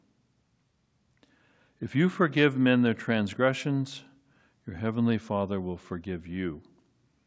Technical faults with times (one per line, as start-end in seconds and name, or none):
none